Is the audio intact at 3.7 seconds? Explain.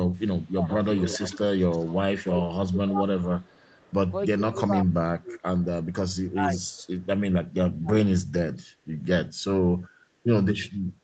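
No. Two faults overlap there. The first is speech suppressed in double talk, from 2.26 to 3.71 s. With both sides talking at once, the echo canceller likely could not tell the near talker from the loudspeaker echo, so it turned both down. Over roughly a second in total within that span, the voice dips, at its deepest by about 25 dB, and comes through weakened or in broken pieces, with the dipping ending just after 3.7 s.

The second is an echo leak, from 3.57 to 3.94 s. The far side's echo canceller likely failed to remove everything its microphone picked up from its loudspeaker, and the residue was sent back. At 3.7 s this is heard as a delayed copy of the voice, arriving 380 ms late and very faint, roughly 35 dB below the speech, a ghost trailing the original.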